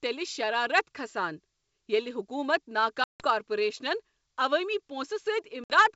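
Packet loss on an ADPCM call breaks the speech at 3.04 to 3.26 s, with about 160 ms of it missing, and again at 5.64 to 5.75 s, where about 60 ms drop out. Each gap is a hard-edged silence. Because the receiving decoder keeps adapting its predictor and step size without the lost data, it falls out of step with the sender. When the wideband audio resumes, it comes back with brief, slight distortion.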